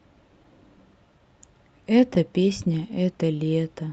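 Throughout the speech, clock drift between sender and receiver is present: the sending side's clock runs roughly 2% slow, so the receiver's jitter buffer keeps draining and must be topped up to avoid running dry. Playback carries a faint, persistent unevenness of timing rather than any single obvious glitch.

From 0.78 s to 3.85 s, repeated timing corrections appear as the receiver stretches the audio to about 98% speed by repeating short fragments, adding around 70 ms overall. If heard at all, these come across as slight hiccups and a faintly dragging, uneven tempo, all in the lengthening direction. The call path's band limit near 8 kHz applies alongside.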